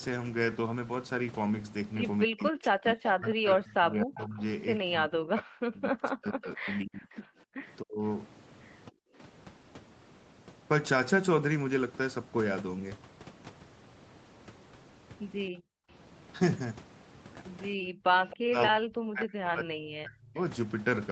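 From 2.26 to 9.09 s the speech is repeatedly pushed down, by as much as about 40 dB and for roughly four seconds in total. This is speech suppressed in double talk, likely from an echo canceller that could not separate the near talker from loudspeaker echo while both sides spoke, so it attenuated everything.

Inside that stretch, echo leak appears at 3.06–3.11 s (about 10 dB below the speech), at 4.17–4.22 s (about 20 dB below) and at 6.69–7.14 s (about 25 dB below). Each time a copy of the voice trails 268 ms behind, likely because the canceller left residual loudspeaker pickup in the microphone signal.

At 7.46–7.53 s the background drops out by about 40 dB for roughly 70 ms. That is background gated by the echo canceller: the microphone is clamped hard while the far end plays, and the room sound comes back once the canceller releases.

The same double-talk suppression returns briefly at 15.53–15.59 s as a dip of about 15 dB. 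It returns at length from 17.75 to 20.38 s, with drops near 40 dB covering about two seconds. At 18.30–18.37 s another echo leak, about 20 dB down, is heard at the same 268 ms delay.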